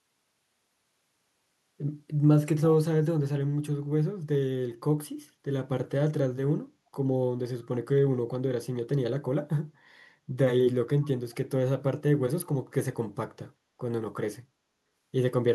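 Around 7.62 to 7.67 s there's a brief echo leak: a very faint scrap of the speech coming back about 372 ms late, way down under the main signal. It's likely a far-end loudspeaker echo that the echo canceller didn't fully remove.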